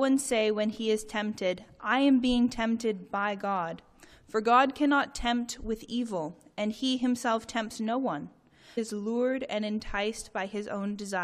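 The audio jumps ahead abruptly at 8.77 s, with a small blip at the join. This is a stream segment skipped. One segment of the segmented stream likely failed to load, so the player moved on to the next. The material in between is gone.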